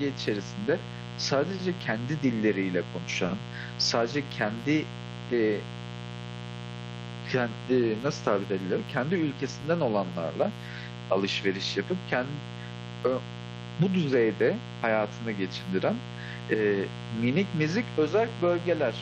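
A mains buzz runs through the whole speech clip: interference from a switching load or poor shielding injects sharp spikes twice per 60 Hz cycle, producing a raspy buzz only around ten decibels below the speech. A spectrogram shows evenly spaced horizontal harmonic lines of 60 Hz reaching into the kilohertz range, and the waveform shows regular spikes.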